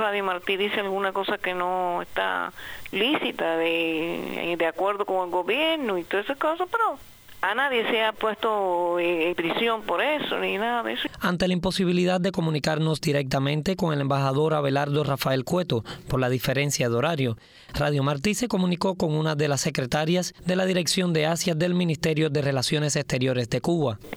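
No technical faults are audible.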